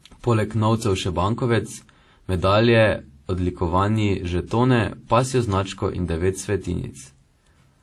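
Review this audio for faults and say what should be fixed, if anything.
Throughout the speech, layered artefacts point to likely transcoding between lossy codecs, with sound fitting WMA, then AAC-LC, then HE-AAC, all near 48 kbit/s. Nothing remains above 12.4 kHz. Unlike a single low-bitrate encode, each stage re-encodes the previous smearing and warble, so several artefact textures overlap. To prevent it, encode once from the original uncompressed source.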